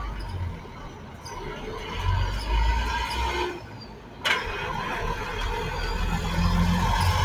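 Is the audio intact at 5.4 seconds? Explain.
No, at 5.4 seconds the sound is caught in a noise suppressor applied to music or sounds, which runs through the whole clip. Built for speech, it treats sustained tones and tails as noise and pulls them down by around 10 dB, so the sound pumps and thins.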